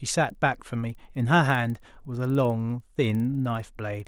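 Throughout, the resampler restarted on every block, converting each 50 ms chunk in isolation, so edge errors tick at 20 Hz whenever speech is present.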